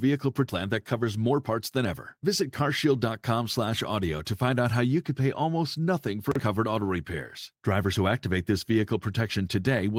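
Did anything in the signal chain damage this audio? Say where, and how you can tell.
Yes. A jitter buffer speed-up runs from 0.59 to 3.08 s. At the network receiver the buffer had built up more speech than its target, as happens when delayed packets arrive together. To drain it, the receiver repeatedly cut out short pieces one or a few pitch periods long, removing about 150 ms in total. The speech runs at 106% of normal speed with its pitch unchanged, so that stretch sounds slightly hurried.

Chunks out of order occur between 6.32 and 6.40 s, after "could pay almost nothing" and before "covered auto repairs". At the network or buffer-writing stage, one 40 ms chunk arrived or was written one chunk late, so it plays after the chunk that should follow it. Nothing is missing, but the swapped order creates three hard joins. The result is a brief jumbled moment.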